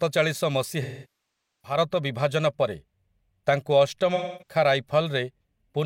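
Speech audio is hit twice by AAC frame loss with concealment: the decoder lost blocks of coded frames and patched the gaps by reusing the last good spectrum, rebuilding it with scrambled phase and tapering energy. From 0.82 to 1.78 s, a dropout of about 0.81 s, the concealed sound smears and then decays into a very faint noise floor before fading back in. From 4.15 to 4.55 s, a loss of about 0.26 s, it leaves a shorter smeared, phasey patch.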